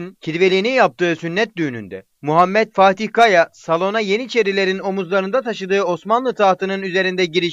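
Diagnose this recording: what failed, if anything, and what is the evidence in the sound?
Nothing in the signal chain appears to have failed: the level, continuity and timing of the audio hold steady throughout, with no audible event that points to a fault at any stage.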